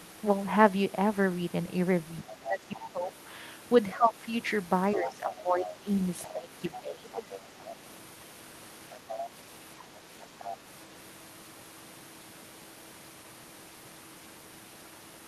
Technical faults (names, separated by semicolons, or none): speech suppressed in double talk; other side's voice leaking through